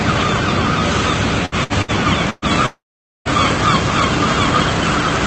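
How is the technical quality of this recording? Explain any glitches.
The recording is damaged by four short bursts of packet loss and one long gap, all between 1.45 and 3.28 s. The audio is band-limited to about 8 kHz, which fits a call codec such as Opus at around 40 kbps.

Burst of packet loss occurs at 1.45–1.55 s, 1.64–1.73 s, 1.82–1.91 s and 2.30–2.45 s. Each time, packets failed to arrive and the receiver stretched the last sound to cover the hole. In the first three, roughly 60 ms is filled and 60 ms of real audio is lost. The fourth fills about 120 ms, ending in a brief 10 ms silence. Each one sounds like a held buzz or a fading hiss, followed by a slight jump forward.

Long network dropout runs from 2.66 to 3.28 s and is likely caused by a stall in the network connection. About 0.6 s of audio is missing. The concealment carries the last sound forward as a fading tone or hiss, which then gives way to roughly 0.48 s of near silence before the sound resumes, further along than where it stopped.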